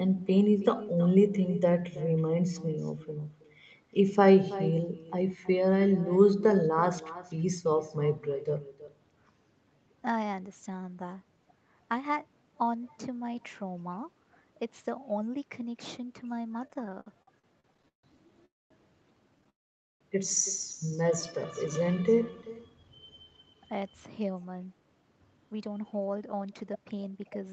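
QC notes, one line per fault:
throughout: echo with no canceller. The speech is shadowed around 300 ms later by a thinner copy about 16 dB down, because the far end's loudspeaker sound is returned uncancelled.
16.67–18.05 s: repeated stalls (stutter). There are 16 short gaps, the longest 151 ms, covering 35% of the span. The jitter buffer kept running empty and stretched the last sound each time, so the speech drags and stutters.
18.45–18.72 s and 19.49–20.03 s: call audio freeze. The speech halts into silence for about 0.23 s and then 0.5 s, and resumes where it stopped each time. The likely cause is delayed packets draining the jitter buffer.
21.21–22.67 s: jitter buffer slow-down. The speech runs at 87% speed at unchanged pitch, drawn out by 204 ms as repeated pitch periods rebuild the buffer's reserve.
24.00–27.49 s: jitter buffer speed-up. The speech runs at 112% speed at the same pitch and sounds hurried, as short pitch-period pieces totalling around 400 ms are cut to reduce excess delay.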